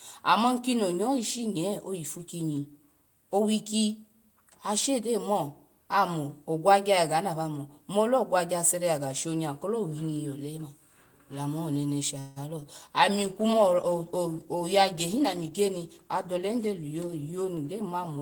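At 12.19 s the sound stalls for 0.17 s and comes back as a fading buzzy continuation of the last sound before resuming where it stopped. This call audio freeze was likely caused by delayed packets draining the jitter buffer. Nothing is lost, but the playback delay grows by 168 ms.

From 12.60 to 12.63 s there is a brief smear where 20 ms of the call failed to reach the decoder in time. This is short concealed packet loss. The receiver extended the preceding sound for 12 ms and then blended back into the real signal, which gives a small wobble.

From 13.17 s to the end, a call bitrate drop takes the encoder from 32 kbps to 14 kbps after the bandwidth estimate fell, and it stays at the lowest rate for 4.6 s. The coarser Opus coding makes the speech rougher and duller, with its top end trimmed.

From 15.17 to 16.82 s, a jitter buffer speed-up plays the speech at 110% of its normal rate. The receiver cut out short pitch-period slices, roughly a fifth of a second in all, to shrink a backlog, so delivery sounds hurried while the pitch stays the same.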